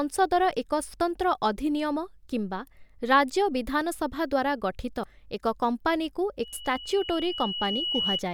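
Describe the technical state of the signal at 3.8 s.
The speech at 3.8 s comes through intact, with no technical fault at that point.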